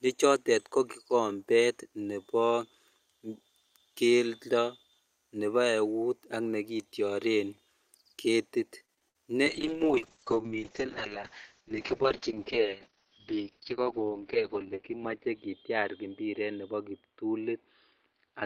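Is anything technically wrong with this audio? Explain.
Yes, there are two faults.

From 8.85 to 9.17 s the speech turns choppy, with small pieces missing. This is repeated packet loss. About four short holes land in quick succession, the longest around 59 ms. The receiver papers over each one by stretching out the last sound it had, covering roughly 132 ms, about 42% of that third of a second. Around 100 ms of audio is still simply absent.

From 9.47 s to the end, the speech loses its brightness and takes on a rough, watery, muffled quality. This is a call bitrate drop. The encoder was pushed from 64 kbps down to 6 kbps, and at that rate it codes everything much more coarsely and cuts the audio bandwidth from about 20 kHz to about 6 kHz. The bitrate sits at its lowest for roughly 5.5 s.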